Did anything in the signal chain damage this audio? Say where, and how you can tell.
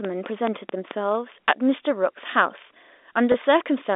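Yes. From 0.05 to 0.92 s, about five regular clicks, roughly 4.6 per second, tick some 15 dB above the speech. This train of clicks likely comes from interference in the analogue wiring.

From 1.11 s to the end, the speech turns thin, bright and hissy. Pre-emphasis was left on, lifting 10 kHz about 11 dB, matching an uncorrected 50 µs FM curve.

At 3.32 s, a 20 ms gap is bridged by a brief buzzy hold. This is packet loss with pitch repetition on the network, consistent with one dropped packet.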